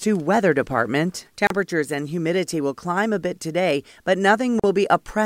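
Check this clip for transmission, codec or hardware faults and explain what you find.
Two short dropouts break the speech, at 1.47 s and 4.60 s. Both are gaps at a join of encoded pieces. The first gap lasts 32.5 ms, the second 41 ms. Each piece was likely encoded on its own and then butted together untrimmed. The encoder's start-up delay and final-frame padding both remain as dead air. The edges are smeared by the codec. Speech then resumes exactly where it stopped.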